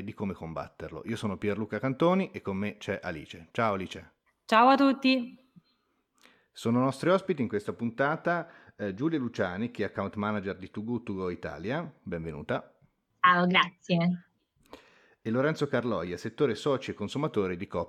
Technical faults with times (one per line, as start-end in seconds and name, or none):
none